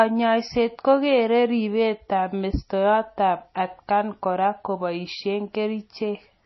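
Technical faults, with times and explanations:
Throughout, MP3 compression, likely. Nothing is left above about 5.8 kHz, so s sounds lose their edge. The codec damage is plainly audible. Weak frequency lines switch on and off between frames, giving a watery, swirly texture. This fits a low bitrate near 24 kbps.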